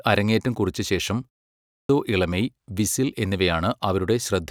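Right after "അരങ്ങേറ്റം കുറിച്ച ശേഷം" there's a short pause of about 0.3 s, and when the speech comes back at 1.52 s you get a clipped start after a pause. The output path seems to drop into a low-power state during that gap and takes a moment to wake up, so roughly 0.37 s of sound up to 1.89 s just isn't there. The next phrase jumps in abruptly, with its opening sounds gone.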